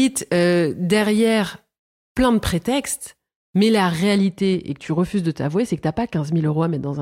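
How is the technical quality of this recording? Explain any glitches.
The recording has one fault, affecting its final stretch. From 4.18 s to the end, just after "de prétextes mais la", the speech turns dull and muffled. That is de-emphasis applied wrongly: a treble-cutting filter, meant to undo a high-frequency boost that was never there, slopes the response smoothly downward, leaving 10 kHz about 14 dB below 1 kHz.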